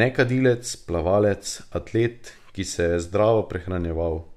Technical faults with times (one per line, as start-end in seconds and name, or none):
none